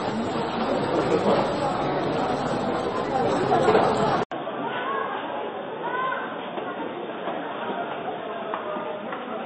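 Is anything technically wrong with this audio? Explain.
Yes, two things. For the whole clip the audio has MP3 compression damage, and it's heavy. Nothing comes through above 8.3 kHz, so the top end is just shaved off. What's left sounds watery and swirly, with transients smeared. That's the encoder running out of bits, dropping the treble and zeroing weak frequency lines that flicker from frame to frame. It's likely a low-bitrate MP3, something around 24 kbps.

Then at 4.24 s the sound cuts out for about 80 ms and comes back duller and boxier through to the end. The band now stops at 3.6 kHz, the level is down by about 5 dB, and there's a faint new noise floor roughly 45 dB below the signal. That pattern points to the input being switched to a poorer device partway through, likely another mic or a headset's narrowband call profile.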